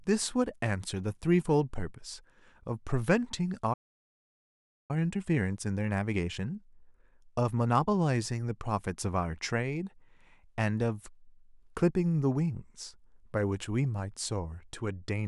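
At 3.73 s the speech cuts out mid-flow and the output falls completely silent for about 1.16 s. It resumes at 4.91 s. This is a playback stall. The player's output simply stopped being fed, most likely because its buffer ran dry or the thread delivering audio was held up, and nothing could be heard until data arrived again.

From 4.91 s to 7.91 s the speech sounds hurried, running roughly 15 percent faster than normal, yet its pitch stays where it was. This is time-compressed catch-up. Having fallen behind during the gap, the player trims its backlog by dropping short slices of audio and cross-fading across the joins. That speeds delivery without shifting pitch.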